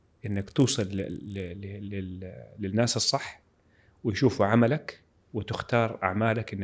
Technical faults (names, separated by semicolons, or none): resampler restarted on every block